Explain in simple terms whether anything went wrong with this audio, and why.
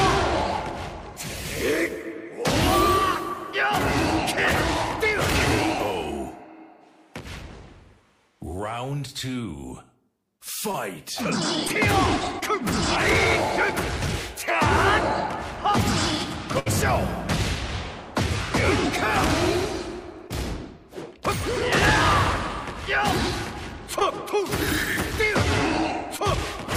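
Short concealed packet loss occurs at 10.71, 11.68, 12.39, 20.28, 23.99 and 26.16 s: about 20 ms went missing each time, patched by extending the preceding sound, causing brief smears or wobbles. A burst of packet loss at 16.59 to 16.68 s drops about 60 ms, covered by a fading continuation before the audio jumps ahead.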